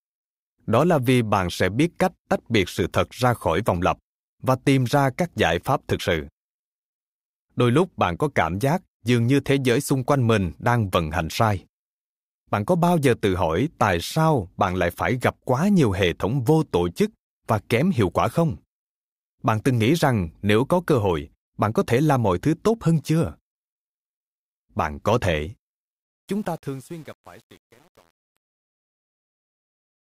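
From 26.03 s to the end at 30.13 s, the speech fade-out turns gritty, worst from 26.32 s. This is truncation distortion on a fade, with undithered quantisation that fits an 8-bit stage.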